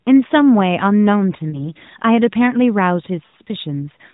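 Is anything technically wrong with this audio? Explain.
Yes, there are two events of lost AMR speech frames. Around 1.50 to 1.72 s the speech briefly dips and warbles, which fits a single dropped 20 ms frame. From 3.26 to 3.35 s a longer gap is smeared and drawn out, fading before the speech returns rough, consistent with roughly four consecutive frames lost over 80 ms. Corrupted frames failed their check, so the decoder filled each gap by repeating the previous pitch and vocal-tract settings at shrinking gain. The AMR narrowband codec's limited band and light coding texture can be heard throughout.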